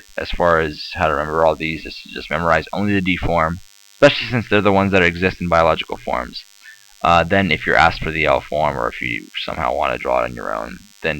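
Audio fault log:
Throughout, DECT cordless phone buzz: a steady, thin, wiry buzz sits under the sound for the whole clip, roughly 30 dB below the main signal, with a rough edge from its many harmonics. It repeats at 100 Hz because a nearby DECT handset or base station transmits a short radio burst every 10 ms. The audio circuitry rectifies each burst, turning the radio pulses into an audible click train that fuses into this constant buzz.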